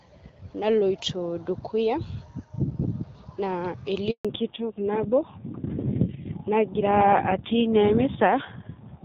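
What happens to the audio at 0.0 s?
At 0.0 s the speech is intact, with nothing going wrong at that moment.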